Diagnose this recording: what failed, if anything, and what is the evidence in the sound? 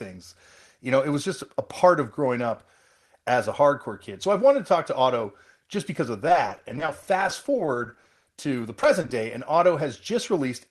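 Network stage: repeated packet loss (robotic sound) at 6.28–8.45 s, after "otto just because of", and 8.82–9.12 s, before "day and otto". Holes of up to 20 ms are patched by extending the previous sound, so the spectrogram shows smeared, repeated frames.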